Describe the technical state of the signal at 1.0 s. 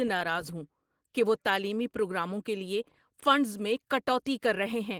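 At 1.0 s the speech carries Opus voice compression, present across the whole clip. The coarsely coded excitation makes it sound hoarse and slightly robotic, which fits a low bitrate near 16 kbps. Unlike a band-limiting codec, content still reaches about 20.2 kHz.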